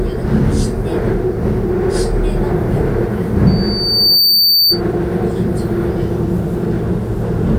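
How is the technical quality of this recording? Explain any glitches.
A loudspeaker feedback squeal appears from 3.47 to 4.81 s. The microphone picked up the loudspeaker it was feeding, and at 4.6 kHz the loop gain exceeded one, so that tone swelled over roughly three quarters of a second into a piercing whistle, peaking about 5 dB above the surrounding sound.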